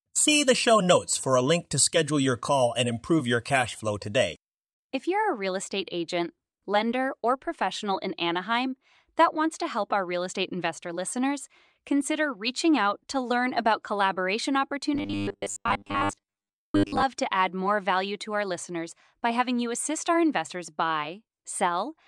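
Robotic sound from repeated short buffers runs from 14.94 to 17.03 s, between "to learn about collaboration" and "to add more value". The speech collapses into a rigid, metallic buzz at 100 Hz that still loosely tracks the words. The likely cause is audio arriving too seldom, with the playback repeating a 10 ms slice to cover the gap, so most of that stretch is repeats while the real audio in between is lost.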